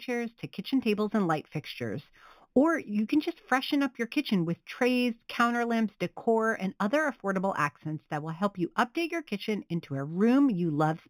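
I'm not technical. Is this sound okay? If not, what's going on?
No. The whole clip has imaging from linear upsampling. It was converted to a higher sample rate crudely, so the speech sounds dull, with a faint metallic shimmer on hissy sounds.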